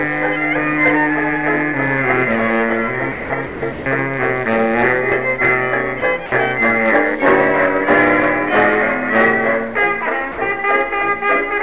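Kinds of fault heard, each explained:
Sound dropped by the voice detector: brief gaps of 20 to 180 ms, around 3.1 to 3.9 s and near 6.0, 6.3 and 10.3 s, are filled with flat, steady noise, likely comfort noise after the detector stopped sending. Unlike loss concealment, nothing repeats or smears.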